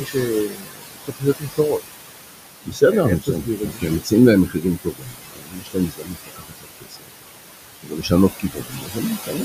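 From the start to the end of the clip there are noise suppressor artifacts. The room noise, about 8 dB below the speech, is pulled down by about 20 dB frame by frame. The leftover noise sinks between the words and rises under them, and on a spectrogram the gaps show flickering, patchy speckle.

Speech cut by the noise suppressor occurs at 0.00–1.82, 2.58–2.82, 3.20–4.12, 4.46–7.13, 7.83–8.12 and 8.30–9.44 s. Stretches of speech drop by about 16 to 22 dB, so soft consonants and word endings sound swallowed. The waveform shows sudden dips in the envelope, and the spectrogram shows faded high-frequency consonant streaks.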